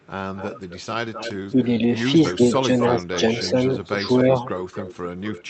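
Echo leak runs from 0.0 to 0.81 s, 1.13 to 1.65 s, and 2.29 s to the end. A faint, delayed copy of the speech trails the original by 256 ms, about 20 dB below the speech at first and nearer 15 dB down later. The likely cause is a far-end loudspeaker whose echo canceller let part of the microphone pickup through and sent it back.

Speech suppressed in double talk appears at 1.54 to 1.67 s and again from 2.37 to 3.05 s, overlapping the returning echo. The speech dips by roughly 5 dB in short patches, about a tenth of a second in total in the first stretch and a fifth of a second in the second. The canceller likely could not tell the talker from the echo and pulled both down together.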